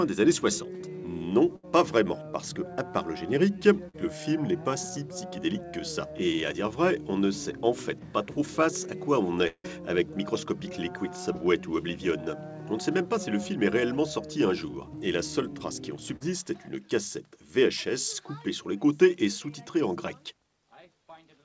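At 1.56 to 1.65 s, a burst of packet loss: about 80 ms of consecutive packets were lost or arrived too late, so the receiver continued the last sound and faded it before resuming further on.

At 3.89 to 3.95 s, a short concealed packet loss occurs, as a few hundredths of a second never reached the decoder. Patched-in continuation blends back as a brief smear. The same happens at 11.33 to 11.36 s and 16.16 to 16.22 s.

At 9.47 to 9.69 s, the audio carries on as a decaying continuation of the last sound for about 165 ms, drops to silence for about 60 ms, then returns with a piece missing. This is likely a long network dropout.

Throughout, nothing is heard above 8 kHz, which fits a G.722 call codec.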